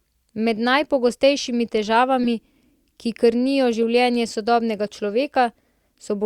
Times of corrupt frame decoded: 2.24-2.27, 3.83

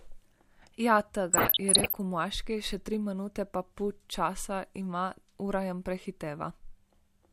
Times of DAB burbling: 1.33-1.95

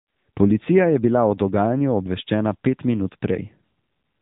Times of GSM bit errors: none

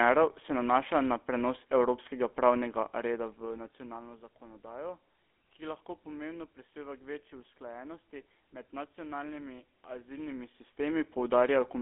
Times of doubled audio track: none

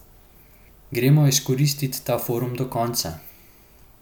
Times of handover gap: none

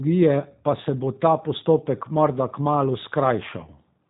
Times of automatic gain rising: none

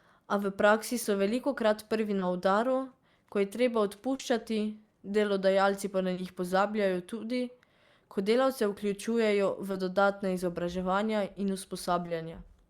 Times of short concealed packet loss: 1.03-1.07, 2.19-2.23, 4.15-4.21, 6.13-6.19, 9.71-9.75, 12.05-12.09

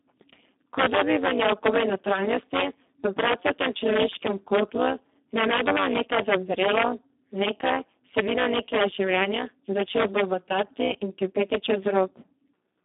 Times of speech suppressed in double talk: none

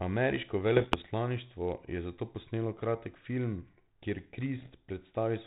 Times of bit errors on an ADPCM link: 0.76-1.07, 4.58-4.72

